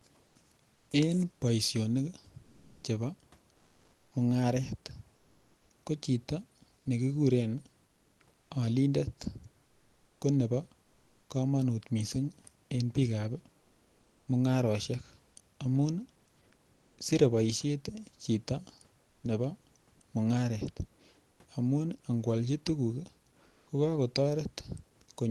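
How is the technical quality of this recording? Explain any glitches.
The recording has one recurring fault: comfort noise in place of the background, in eight pauses between speech. The call path's band ends near 12 kHz, which points to an Opus-coded call, and the room noise sits about 39 dB below the speech.

Comfort noise in place of the background appears at 0.27–2.83 s, 7.87–8.49 s, 10.83–11.29 s, 13.59–14.27 s, 16.73–16.97 s, 19.03–19.23 s, 21.31–21.39 s and 23.47–23.67 s. In each pause the sender likely stopped transmitting because its voice detector found no speech, so the receiver generated a smooth, featureless hiss in place of the real room sound. The synthetic noise runs up to about 4 dB quieter at 10.83 s and about 3 dB quieter at 19.03 s, with changes of about 1 dB at 13.59 s, 16.73 s, 21.31 s and 23.47 s. On a spectrogram, each pause shows a uniform, texture-free noise floor where the room noise had fine detail, often with a faint step in level at its edges. 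On a waveform, the noise has a flat, even envelope between the speech bursts.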